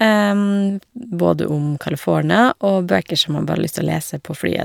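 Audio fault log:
No faults heard anywhere in this speech recording.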